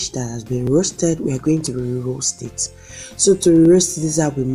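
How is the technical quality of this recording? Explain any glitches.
The recording has a recurring glitch. Audio missing between chunks occurs at 0.67, 1.67, 2.66 and 3.65 s: a brief skip roughly once per second, where a few milliseconds of sound vanish and the two sides butt together, likely from a processor losing audio while switching one-second chunks.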